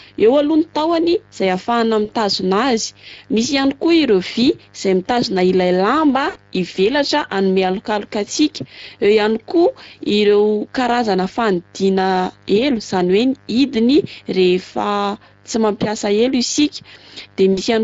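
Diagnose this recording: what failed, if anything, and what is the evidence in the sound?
Codec stage: Speex codec damage is plainly audible across the whole clip. The speech is hoarse and noisy, consistent with a Speex encode at roughly 20 kbps. A spectrogram shows smeared harmonics and grainy, noise-like texture between formants, because the excitation gets too few bits.

Network stage: VoIP packet loss concealed by the speech codec occurs at 2.05–2.13 s, 6.29–6.38 s and 17.53–17.61 s, with gaps of 40, 60 and 40 ms. The decoder repeats its last pitch and filter with falling gain. This shows as a stretched, fading sound, buzzy or noise-like, with a tapering envelope on the waveform.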